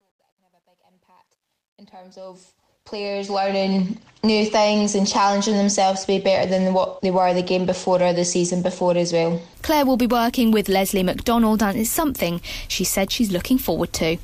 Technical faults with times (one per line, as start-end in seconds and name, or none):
0.00-3.72 truncation distortion on a fade